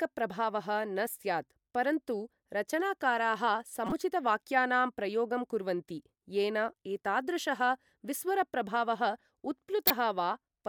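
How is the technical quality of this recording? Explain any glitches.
The speech has two short glitches from a corrupt frame decoded. The first runs from 3.87 to 3.92 s, just after "परन्तु रचनाकाराः". The second runs from 9.87 to 9.96 s and is louder, peaking near about -10 dBFS against about -20 dBFS for the first. Each time, damaged bits in a few compressed frames were decoded anyway. Misread gains and codes put energy at the wrong frequencies, so each is heard as a brief chirpy burst of noise.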